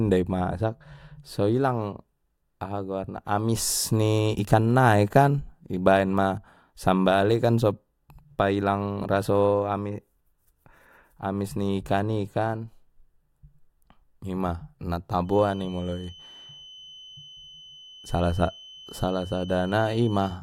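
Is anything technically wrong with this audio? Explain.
Yes. From 15.22 s to the end of the speech, a feedback whistle sits at 3 kHz, well below the voice. The likely cause is a speaker-to-microphone loop balanced just short of runaway, sustaining one thin, slightly wavering tone that shows as a steady horizontal spectrogram line.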